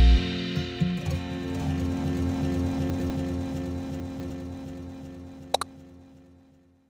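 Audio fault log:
2.9 to 3.1 s and 4.0 to 4.3 s: chunks out of order. The audio moves in 100 ms pieces, and here one piece plays after material that should come later. At 2.9 s a chunk lands one chunk late. At 4.0 s a chunk lands two chunks late. Nothing goes missing, but the sequence scrambles. Each swap leaves three hard joins between mismatched waveforms. So each moment sounds jumbled.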